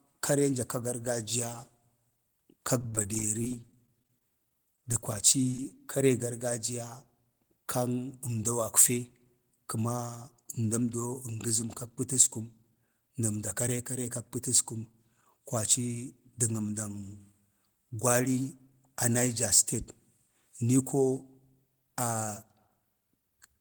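From 2.81 to 5.85 s the speech turns choppy, with small pieces dropping out. This is repeated packet loss: dozens of brief holes, none longer than about 24 ms, arrive in quick succession. Each is patched by stretching the preceding sound. About 13% of the stretch is concealed this way, roughly 390 ms of fill, with around 290 ms of the original audio simply gone.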